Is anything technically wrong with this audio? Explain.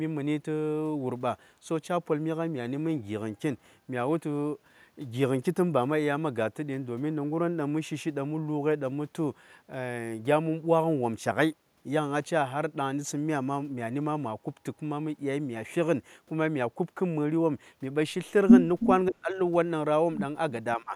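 Yes. From 18.8 to 18.94 s there is an echo leak: a faint copy of the voice, roughly 10 dB down, trails it by about 322 ms. This is likely a loudspeaker echo the far end's canceller missed.

Speech suppressed in double talk follows, from 19.09 to 19.39 s and from 20.77 s to the end. The voice drops by up to about 30 dB, then about 20 dB. The echo canceller likely ducked it.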